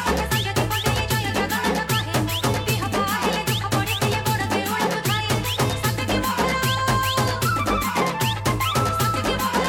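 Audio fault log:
Nothing here to log, as the whole clip sounds exactly as it should.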